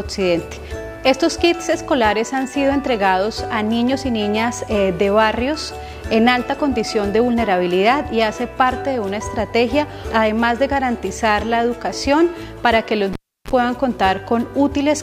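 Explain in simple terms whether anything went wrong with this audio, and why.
At 13.13 s, a cable was pulled and plugged in. A pop, about 0.33 s of near silence, a brief 50 Hz buzz, then another pop by 13.51 s.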